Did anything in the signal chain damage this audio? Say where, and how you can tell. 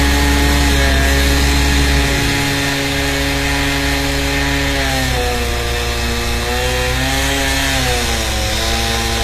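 Yes. The damage sits at the codec stage, and the likely culprit is HE-AAC compression at a low bitrate, plausibly around 24 kbps. Throughout the sound, the treble is synthetic, with nothing above about 14.9 kHz. The upper band is rebuilt by copying lower-frequency content upward under a coarse envelope, so its harmonics fail to line up with those below the crossover. Sibilant and noisy high components come out gritty and metallic.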